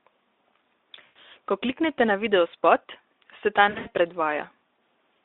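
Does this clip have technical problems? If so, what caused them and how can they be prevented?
Yes. The speech shows VoIP packet loss concealed by the speech codec at 1.06 to 1.16 s and again at 3.69 to 3.88 s. Here the decoder kept extrapolating from its last pitch and filter state, so the sound smears into a buzzy tone or a coloured noise that fades. Each gap is followed by a weak recovery as the decoder state rebuilds. The first gap is about 100 ms of lost audio. The second is scattered across about 160 ms, with its longest run about 80 ms. The narrowband Speex coding beneath it carries only light coding damage. Preventing this means reducing network loss with QoS prioritisation or a wired link, and adding forward error correction or packet redundancy so that lost frames can be recovered rather than guessed.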